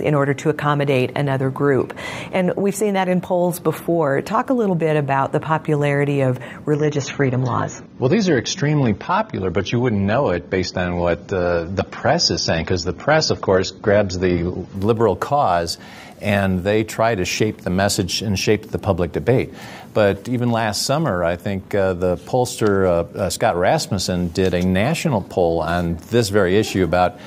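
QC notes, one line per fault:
6.76–14.76 s adaptive stream at a lower bitrate: abrupt gapless switch to dull, smeared sound with nothing above 6.9 kHz as the player dropped to a low-bitrate version, unlike a dropout.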